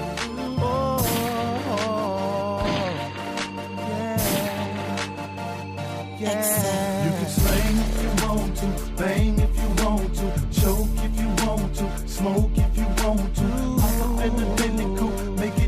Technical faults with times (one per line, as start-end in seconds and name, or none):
none